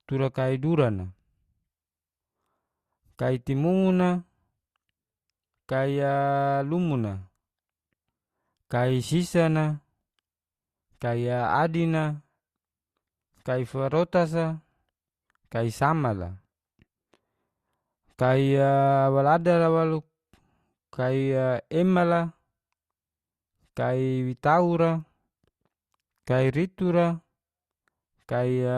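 Nothing in the speech stood out as a technical problem on listening.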